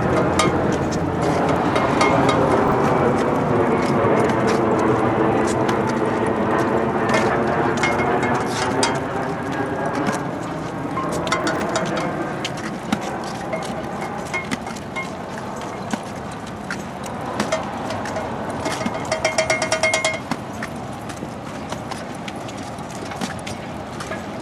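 At 2.64 to 2.72 s, and again at 11.44 to 11.6 s, chunks play out of order. A 40 ms chunk arrives late and plays one chunk behind its place the first time and three chunks behind the second time. Each reshuffle sounds like a brief jumbled stutter. The waveform shows three abrupt discontinuities per event. The spectrogram shows a short out-of-sequence block.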